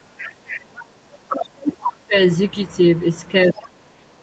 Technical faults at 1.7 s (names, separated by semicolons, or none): speech suppressed in double talk